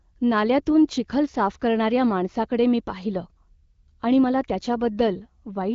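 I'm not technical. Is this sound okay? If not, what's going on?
Yes, nothing is wrong with this speech recording.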